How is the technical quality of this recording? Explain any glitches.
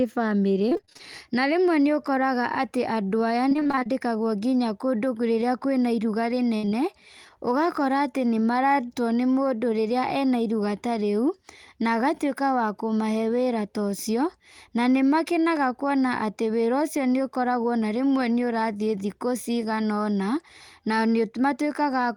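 The recording has audible network-transmission damage in three places, all in the first seven seconds of the 22-second speech clip.

Repeated packet loss (robotic sound) occurs from 0.69 to 1.01 s and again from 3.49 to 3.87 s. In each stretch, short dropouts arrive in rapid succession, none longer than about 24 ms. The receiver fills every hole by extending the preceding sound. About half of each span is synthesised rather than received, roughly 160 ms in the first and 180 ms in the second. The result is choppy speech with fragments missing.

A burst of packet loss runs from 6.57 to 6.65 s. About 60 ms went missing as one block. The decoder carried the last sound forward across the gap while fading it out, so a voiced segment turns into a held buzz and an unvoiced one into a decaying hiss. Speech then picks up past the hole, and the material that fell inside it is gone.

Short concealed packet loss follows immediately, at 6.65 to 6.69 s and again at 6.69 to 6.73 s. 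Each event involves about 20 ms that was lost and patched. The receiver extrapolated from the pitch of the preceding audio, or from shaped noise where the sound was unvoiced, and then crossfaded back into real audio. Coming right after the burst, these two events extend the damaged region into a brief smear or wobble, and a short consonant may drop out.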